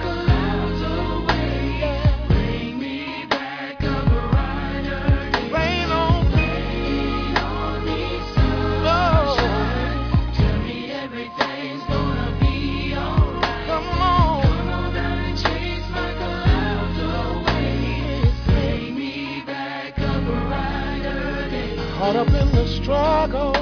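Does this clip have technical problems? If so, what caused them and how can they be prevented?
No, there are no technical problems to report in this clip. With no fault present, there is no cause to trace and nothing that needs preventing.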